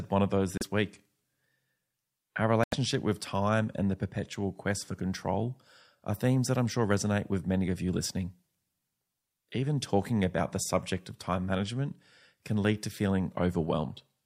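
A Bluetooth stall shows up at 0.58 s, just after "one of those", and again from 2.64 to 2.74 s, just before "with time and the". The speech drops to silence for 34 ms, then 87 ms, and resumes. The likely cause is radio interference delaying packets, so the headphones' buffer emptied and playback halted until the retransmitted audio caught up, leaving short clean gaps in the speech.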